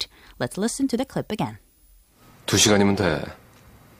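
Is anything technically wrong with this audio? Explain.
No, nothing is technically wrong with this audio.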